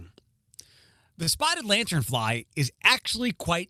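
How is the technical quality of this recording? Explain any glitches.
Two brief glitches interrupt the speech, both short stalls from a late packet. At 1.23 to 1.29 s and 2.74 to 2.79 s, a packet arrived late and the jitter buffer ran dry, so the receiver stretched the last sound by about 36 ms and 29 ms, then resumed where it stopped. Nothing is lost, but a sound lingers too long. A spectrogram shows flat, smeared horizontal bands there, and the waveform shows a repeated, periodic stretch.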